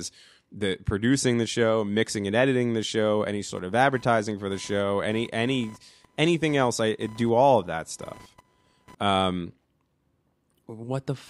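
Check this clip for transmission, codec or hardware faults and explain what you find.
One hardware fault is present: computer activity noise, from about 3.55 s to 8.95 s. During that stretch a buzzing, chirping layer sits roughly 30 dB below the speech. It is caused by changing load on the processor, graphics card or mouse pulling on the ground the audio circuit shares, so the interference tracks the computer's work rather than the talker. Its pulses repeat at around 1 kHz. On a spectrogram it shows as a narrow band near 1 kHz with harmonics that starts and stops independently of the speech. On the waveform it appears as a faint, fast ripple riding on the speech and pauses.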